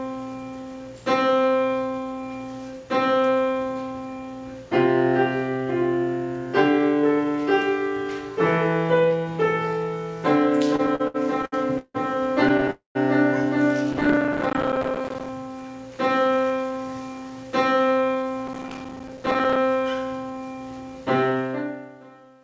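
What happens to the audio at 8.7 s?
Nothing goes wrong at 8.7 s: the audio runs on intact through that moment, with no dropout, glitch or other fault.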